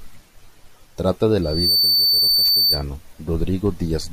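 At 1.42 s a loudspeaker feedback squeal begins. A microphone is picking up the loudspeaker it drives, and the loop gain has passed one at a single frequency. That tone, near 4.6 kHz, feeds on itself. It swells out of the speech over about a third of a second. It then sits as a piercing whistle, a few decibels louder than the speech. It stops at 2.85 s.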